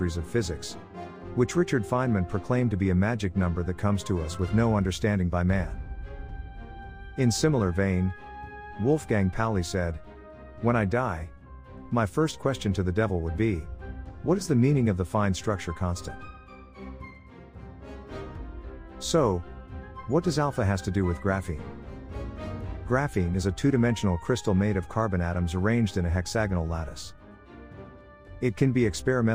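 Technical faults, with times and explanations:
No technical faults can be heard anywhere in the clip. There is nothing here that calls for a time or an explanation.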